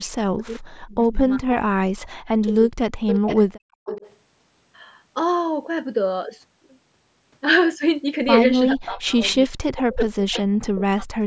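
Right from the start, 0 to 1.21 s and again 1.39 to 2.71 s, the speech keeps sinking and breaking up, dropping by something like 40 dB at its worst, with about a second of each stretch hit. That's speech suppressed in double talk: most likely the far end was talking at the same time, and the echo canceller couldn't tell this talker from its own loudspeaker echo, so it pushed everything down.

At 3.07 to 3.4 s there's a ghost copy of the voice trailing about 434 ms behind, and it's loud, only about 5 dB under the speech. That's echo leak, likely the far side's loudspeaker getting into its microphone with the canceller not scrubbing it out fully, so it bounced back to us.

From 3.56 to 3.85 s the room sound itself falls away by about 38 dB for roughly 0.3 s, then comes back. That's background gated by the echo canceller: it clamped the microphone hard while the loudspeaker was active and released once it settled.

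Straight after, 3.85 to 4.16 s, the echo leak returns at the same 434 ms lag, a bit quieter at about 10 dB down.

From 8.73 s to the end the double-talk suppression is back, carving out around two seconds' worth of the speech in dips as deep as about 40 dB. Inside that, at 10.33 to 10.42 s, one last faint scrap of echo leak slips through, about 20 dB below the speech and again 434 ms late. The whole call path also tops out at 8 kHz.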